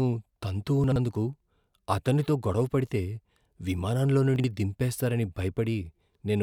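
At 0.84 to 0.96 s and 4.36 to 4.44 s, chunks play out of order. A 40 ms chunk arrives late, giving a jumbled blip.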